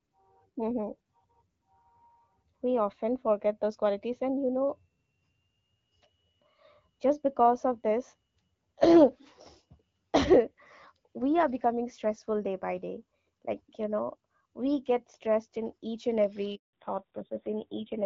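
At 16.55 s, just after "stressed in each and", the speech cuts to silence for 180 ms until 16.73 s. This is a handover gap: the call switched networks and no speech frames arrived during the transfer, so that stretch is simply lost.

From 16.73 s to the end, the voice turns duller and rougher, with nothing above 4 kHz. This is a fallback to narrowband. After the handover, the call dropped from the HD Voice AMR-WB codec, heard earlier at 12.65 kbit/s with only light coding damage, to narrowband AMR. The roughness fits a low rate of around 5.9 kbit/s.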